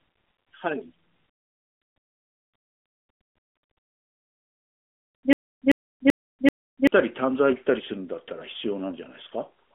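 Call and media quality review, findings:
Stutter with silent gaps, 5.33 to 6.87 s. The same 159 ms burst of speech replays four times, each followed by 227 ms of dead digital silence, giving a steady 386 ms cycle. Likely a stalled player or stream buffer retrying its last fragment, with the speech due in that stretch lost. The narrowband AMR call path, topping out around 3.6 kHz, plays no part in it.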